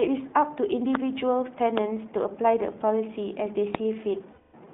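Throughout, the speech carries iLBC codec damage. The band stops near 3.7 kHz, and the voice sounds rough and synthetic, which points to 15.2 kbps iLBC.

Loud pops strike at 0.95, 1.78 and 3.75 s. Each is a sharp click, about 20 dB above the speech, most likely a voltage spike from a switch or static.

From 4.32 to 4.55 s, lost iLBC frames leave 220 ms of held, buzzy vowel. This fits eleven 20 ms frames concealed by pitch repetition. The speech then recovers at once.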